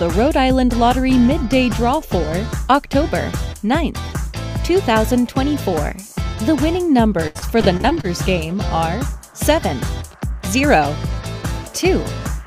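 From 7.27 to 8.05 s there's repeated packet loss (robotic sound). Eight short dropouts, the longest about 74 ms, each get patched by stretching out the last bit of sound. About 28% of the stretch is concealed, so it comes out choppy with pieces missing.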